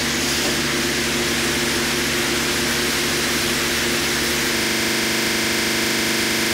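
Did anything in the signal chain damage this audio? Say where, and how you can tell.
Yes. A system hang loop begins at 4.57 s and runs to the end of the clip. This is a driver or buffer fault. The host stopped supplying new audio, while the converter kept replaying the last 40 ms stretch of its ring buffer. That fragment repeats exactly, roughly fifty times, and its 25 Hz repetition rate produces a rough, rapid buzz with no forward movement in the sound. The loop length fits a 40 ms buffer.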